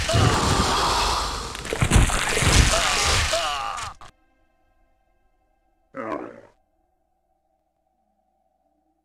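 Right at the start, from 0.34 to 0.60 s, there's a stretch of chunks out of order. A block of audio landed two chunks late, so it plays after the two that should have followed it. Nothing's missing, but the sequence is scrambled and there are hard joins where the pieces butt together, giving a jumbled, garbled moment. Each chunk runs about 85 ms, which fits a 4096-sample block at 48 kHz.

From 1.98 to 3.01 s you get overlap-add ripple. The audio was chopped into windowed frames and stitched back with an overlap that doesn't sum to a steady gain, so the level swings by about 6 dB once per frame. The swing repeats at around 200 Hz, meaning short frames, so it comes across as a metallic buzz riding on the sound, with extra tones around what's really there.

The chunks out of order fault comes back twice. From 3.93 to 4.10 s one chunk is a single slot late, a shorter swap. Then from 7.60 to 7.85 s it's two chunks late again, with the same jumbled, hard-joined effect as the first one.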